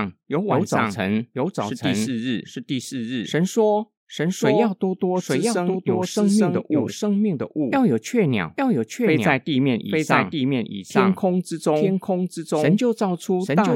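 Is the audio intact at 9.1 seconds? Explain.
No. At 9.1 seconds, as throughout the clip, the speech is heard twice: a second, equally loud full-band copy trails about a second behind, with no decay or room colour. This doubled audio track likely comes from the signal being captured again through a slower path.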